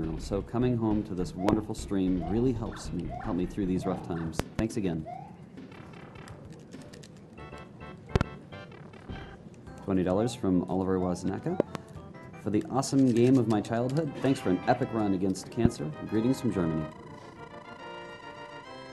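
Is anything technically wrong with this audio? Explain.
Yes. A loud pop occurs five times, likely from sudden voltage pulses such as static or a switching glitch entering the signal. Double pops land at 1.49–1.55, 4.40–4.61, 8.16–8.23 and 11.60–11.77 s, and a single one at 15.65–15.68 s. Each is a sharp thump about 20 to 25 dB above the sound, which carries on underneath.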